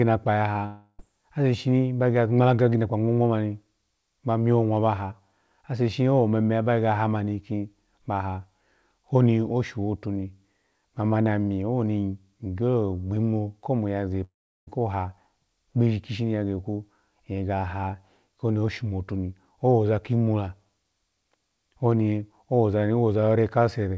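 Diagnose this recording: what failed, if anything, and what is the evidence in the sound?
At 0.66 to 1.00 s and 14.24 to 14.68 s the speech smears into a fading buzz, then near-silence (brief at first, about 0.37 s the second time) before resuming at "ase shishini ba gege" and "ko ha". This is likely a long network dropout: roughly 0.3 and 0.4 s of packets lost in the wideband call path (nothing above 8 kHz), concealed, then skipped.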